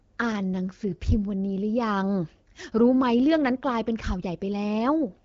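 Speech, with no technical faults to report.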